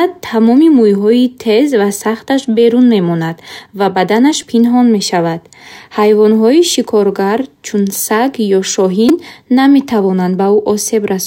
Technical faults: repeated buffer

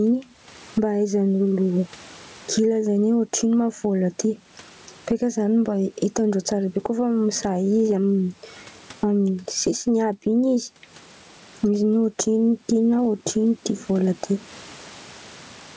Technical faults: gain pumping

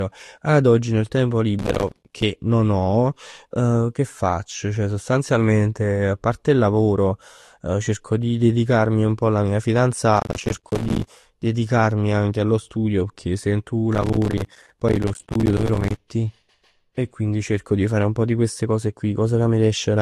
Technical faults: transcoding between lossy codecs; processor overload crackle

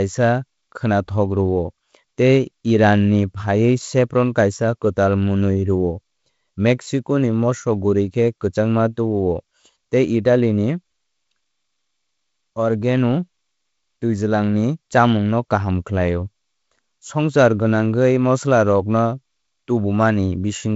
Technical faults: none

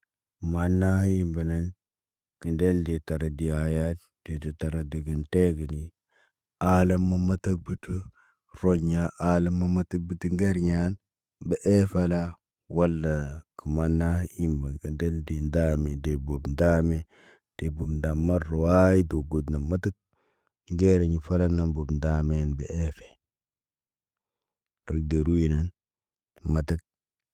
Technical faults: none

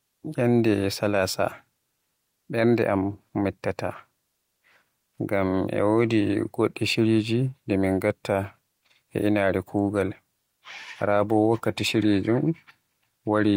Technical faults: none

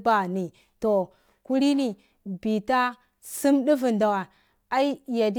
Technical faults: sample clock jitter

